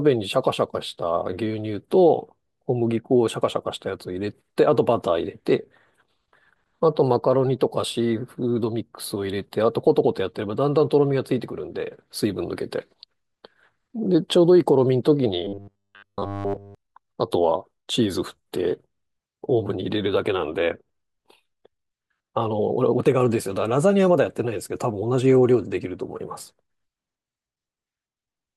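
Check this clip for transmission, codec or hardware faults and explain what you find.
One fault stands out. From 15.45 to 16.75 s the speech collapses into a rigid, metallic buzz fixed at 100 Hz, still loosely tracking the syllables. This is robotic sound from repeated short buffers, likely caused by incoming audio arriving too slowly, so the playback side loops the most recent snippet to fill the gaps. Essentially all of this 1.3 s stretch is repeated material, and a 100 Hz buzz fits a 10 ms chunk cycling over and over.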